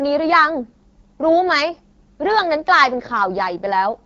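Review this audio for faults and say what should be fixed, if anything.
The whole clip carries AMR wideband (HD Voice) codec damage: the speech sounds rough and raspy, with nothing above 7.5 kHz. The pulse-excited vocal tract model is starved of bits, which fits the 8.85 kbit/s mode, one of the two lowest rates. To prevent it, negotiate 12.65 kbit/s or higher.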